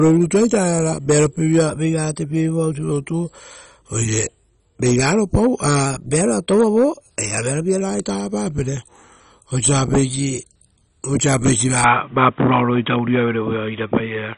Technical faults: MP2 compression; drift correction step; input switched to a poorer device

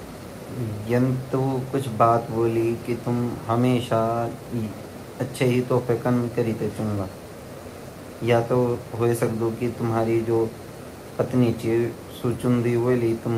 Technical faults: none

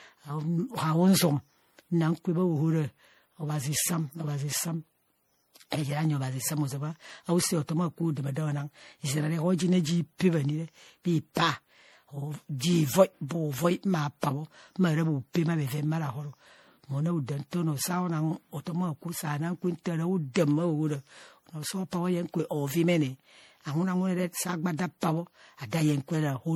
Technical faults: generation loss

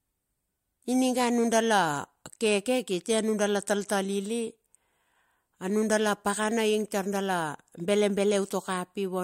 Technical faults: none

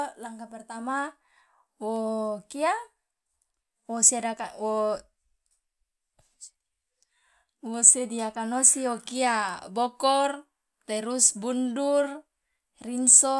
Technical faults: none

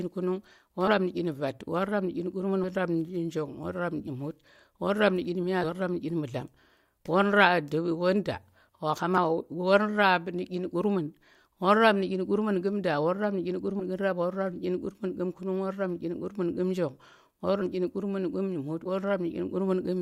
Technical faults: compressed frames skipped

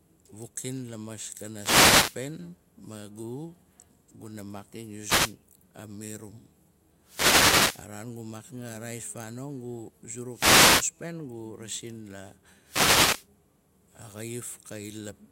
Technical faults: wireless microphone noise hit

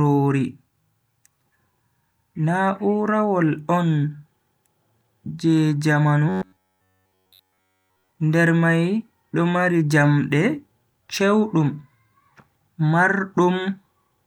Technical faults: robotic sound from repeated short buffers

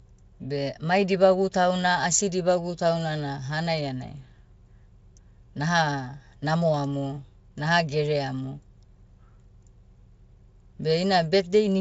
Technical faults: none

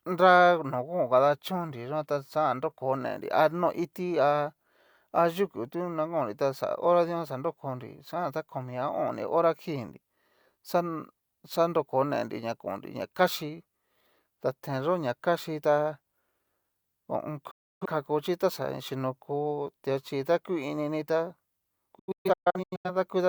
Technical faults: digital broadcast dropout

